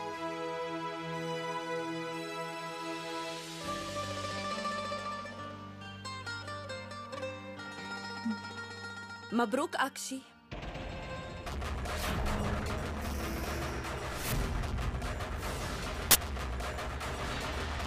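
An uninitialised buffer appears from 16.11 to 16.15 s: a 40 ms block was sent to the output before any audio had been written into it, so whatever stale memory it held was played as samples, giving a brief, loud burst of harsh digital noise.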